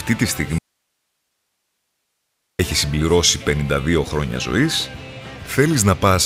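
At 0.58 s the sound cuts out abruptly and stays gone until 2.59 s, an audio dropout to a faint residue about 2.0 s long. The wanted signal was likely lost upstream while the rest of the path stayed live, so the gap holds only steady hiss, roughly 55 dB below the programme level. On a waveform the envelope collapses to a thin flat band with sheer edges; a spectrogram shows a blank-looking block with even, low-level broadband noise throughout.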